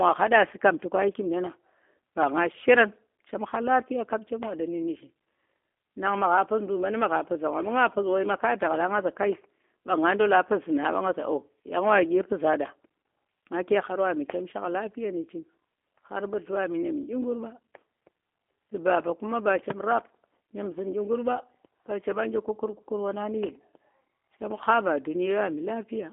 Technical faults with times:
0.00-26.12 G.729 codec

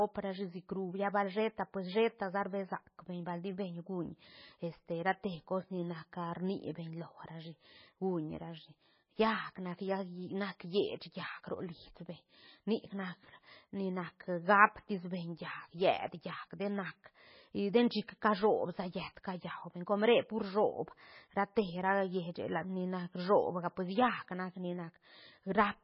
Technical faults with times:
0.00-25.83 MP3 compression

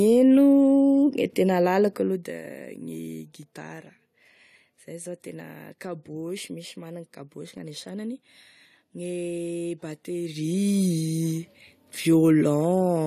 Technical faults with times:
10.23-10.71 zipper noise

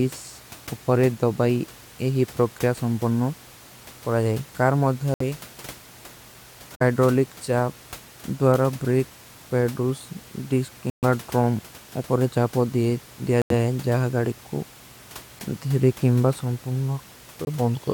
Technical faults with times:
5.14-5.22 corrupt frame muted
6.74-6.82 corrupt frame muted
10.90-11.04 corrupt frame muted
13.42-13.53 corrupt frame muted
17.45-17.48 corrupt frame muted

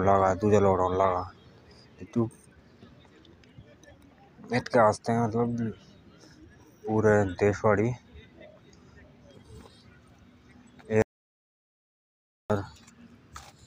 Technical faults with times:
11.02-12.50 audio dropout to silence

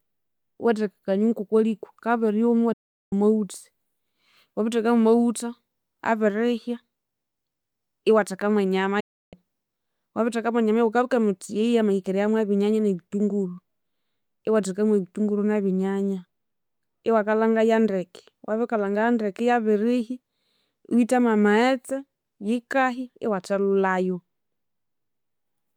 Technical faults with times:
2.73-3.13 digital broadcast dropout
9.00-9.33 digital broadcast dropout

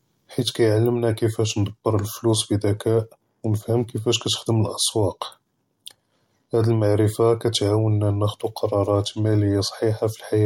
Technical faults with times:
none

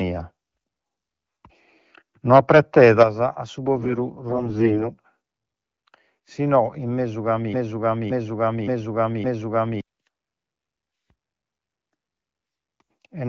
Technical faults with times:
2.32-3.03 microphone overload
3.03 microphone volume stepped down
4.30-4.91 AMR bit errors
7.53-9.81 broken-record loop

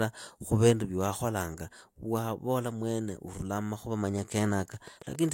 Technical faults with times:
4.18-5.30 train of clicks

